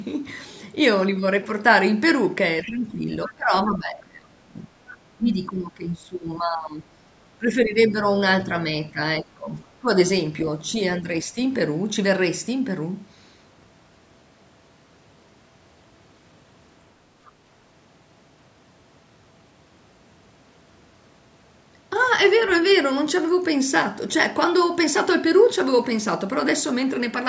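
Right at 2.63 to 2.67 s a faint second voice slips in under the talker, about 20 dB down. It's the other side's voice leaking through, likely loudspeaker echo the canceller didn't fully remove. Just after, from 2.64 to 8.04 s, the talker's own speech keeps sagging and breaking up for around four seconds in total, dipping as much as about 20 dB. That's speech suppressed in double talk: with both sides talking at once, the canceller likely couldn't tell its own talker from the echo and pulled both down. More scraps of leakage turn up inside that stretch, a longer one from 3.26 to 3.69 s at about 20 dB down and a short one at 4.9 to 4.97 s, a bit quieter at about 25 dB down. The suppression comes back at 8.92 to 9.89 s with a dip of about 15 dB and again, only lightly at about 5 dB, at 11.0 to 11.36 s. One last faint bit of leaked voice, about 30 dB down, shows up at 17.25 to 17.3 s. The band stops at 8 kHz, which is just the call's normal microphone processing.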